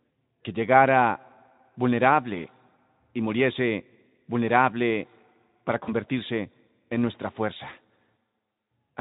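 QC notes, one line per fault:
5.83–5.93 s, VoIP packet loss concealed by the speech codec: about 40 ms of audio went missing, which fits two lost 20 ms frames, and the decoder bridged it by repeating its last pitch and spectral shape at falling gain, so the speech smears into a brief buzzy tone or coloured noise that fades. Unlike a plain dropout there is no silence or click, and the roughness outlasts the loss as the decoder recovers, all over the light Speex coloration.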